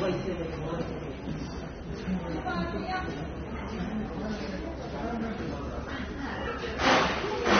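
From start to finish the audio was likely squeezed through AAC compression, the damage fitting AAC-LC at around 24 kbps. The encoder trims high frequencies and quantises the rest coarsely, leaving these sounds plainly dull and smeared, with a fizzy, warbling edge.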